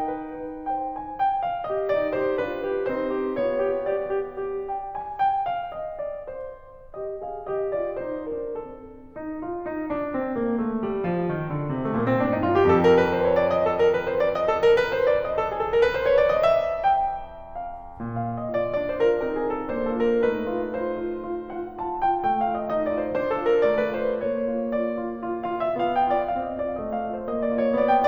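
No technical faults are audible in this music.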